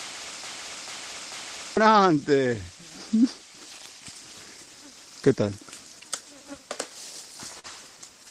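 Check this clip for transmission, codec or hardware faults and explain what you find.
Two faults are present.

From the start to 1.77 s, a broken-record loop: a 0.44 s fragment repeats exactly three times, likely from a stalled player or stream resending its last buffer. Identical repeats, not gaps, separate it from a dropout.

At 7.59–7.67 s, short concealed packet loss: about 40 ms never arrived, and the decoder extended the preceding sound, giving a brief smear rather than the silence of a hard dropout.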